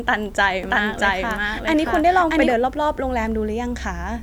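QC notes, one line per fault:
0.63–2.53 s, doubled audio track: the speech is heard twice at once, a second full-band copy trailing the original by roughly 700 ms at about the same loudness. The copy is dry, with no decay or room colour, so it reads as an overlapping duplicate rather than an echo, and it cuts in and drops out abruptly at the range edges. This is likely a second capture of the same signal through a slower path, mixed in alongside the first.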